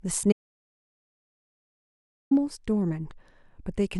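At 0.32 s the speech cuts off abruptly and the audio drops out to silence. It stays dead until 2.31 s, when the speech resumes mid-flow. The gap lasts about 2 s. It is plain silence, with no room tone or background hiss underneath. Whatever was said during that stretch is lost. The likely cause is an interrupted input, such as a brief disconnect or an accidental mute, while recording carried on writing silence.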